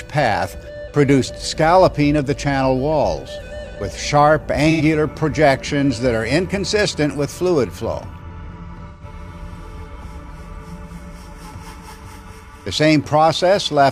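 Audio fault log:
4.70 to 4.81 s and 8.88 to 9.04 s, AAC frame loss with concealment. Two brief smeared, noisy patches replace the audio. The decoder rebuilt missing frames from the last good spectrum, so detail blurs. The gaps fit about two and three lost frames.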